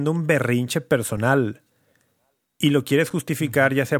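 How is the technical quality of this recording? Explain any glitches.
The speech is marred by two brief dropouts, each heard as a sharp tick rather than a noticeable gap. The first comes at 1.17 s, right after "un berrinche", and the second at 3.10 s. Both are a block of digital silence, about 5.3 ms and 5.8 ms long, where the sound cuts out abruptly and returns with no fade. The output buffer was probably not filled in time.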